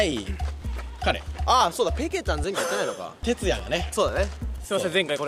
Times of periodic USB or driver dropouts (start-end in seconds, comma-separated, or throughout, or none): 0.12-5.08